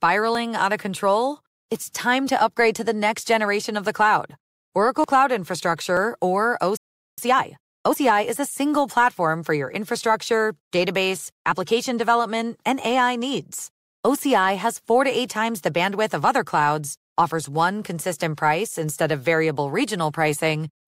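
At 5.04 s the speech has a small forward jump in the sound and no gap of silence. This is a dropped buffer (overrun), likely caused by the capture side failing to read a block of samples before the hardware wrote over it. Roughly 30 ms of audio is missing, and the material on either side is spliced together directly. The abrupt join produces the slight skip.

From 6.77 s to 7.18 s the audio cuts to silence partway through the speech, then resumes. This is a playback stall lasting about 0.41 s. The pause is long enough to hear clearly as an interruption. Its probable cause is the player's output running dry, either because data stopped arriving or because the playback thread was held up.

From 7.18 s to 7.98 s, directly after the stall, the speech sounds rushed but keeps its normal pitch. This is time-compressed catch-up. To work off the backlog left by the stall, the player cuts out short slices of audio and cross-fades the remaining pieces together. 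That runs the 0.8 s stretch at 1.5 times normal speed.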